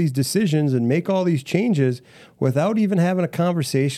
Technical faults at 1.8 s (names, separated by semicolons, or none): none